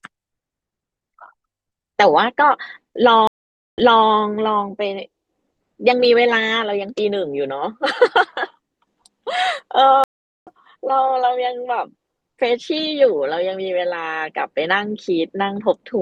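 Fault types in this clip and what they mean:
stream reconnect: the connection drops, playback goes silent, and the player reconnects and restarts its decoder mid-stream, so the speech resumes at a different point. At 3.27 s a gap of about 0.5 s opens, and at 4.08 s the speech returns 0.3 s earlier, repeating that stretch. At 10.04 s a 0.43 s gap follows, and at 10.48 s the speech returns roughly 0.3 s later, skipping that material.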